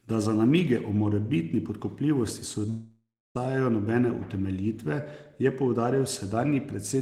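Speech, cut by what is likely a long network dropout from 2.69 to 3.37 s, right after "namige o morebitni podkupljivosti": the last sound smears into a fading buzz or hiss, then about 0.3 s of silence. Unlike brief packet loss, roughly 0.66 s is missing outright, and speech resumes further on.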